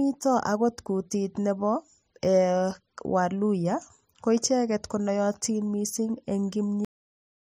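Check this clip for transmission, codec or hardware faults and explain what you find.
There is one fault, a cut-off end. At 6.85 s the speech stops mid-sound and drops straight to digital silence for the last 0.72 s, because the final buffers were never written out. Unlike a fade-out or room decay, nothing tapers, and nothing resumes afterwards.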